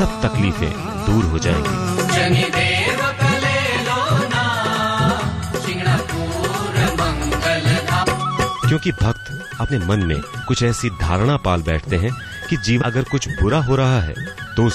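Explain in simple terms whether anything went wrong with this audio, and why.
Three brief chirps or blips cut into the sound at 8.02, 9.67 and 12.81 seconds. They come from damaged data in a compressed stream: some stored bits were wrong, so the player lost its place and had to search for the next readable chunk.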